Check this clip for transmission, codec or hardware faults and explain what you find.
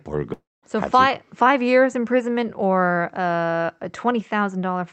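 There's one clear fault here, a long network dropout early in the speech.

From about 0.33 s to 0.65 s the audio cuts out for roughly 0.3 s. What you hear is the receiver stretching the last bit of sound into a fading buzz, which then drops into about 0.22 s of near-silence before the speech picks back up, with that chunk simply gone. The likely cause is a run of packets that never arrived, so the jitter buffer had nothing real to play and fell back on concealment. The top end sits capped around 8 kHz, which fits an Opus call path.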